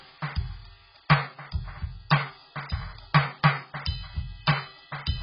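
Throughout the music, nothing is heard above 5.5 kHz, and sustained notes carry a warbling, fizzy smear with holes in the spectrum. A plain low-pass filter would only dull the sound without that texture. This points to heavy AAC compression, likely AAC-LC at a very low bitrate near 12 kbps.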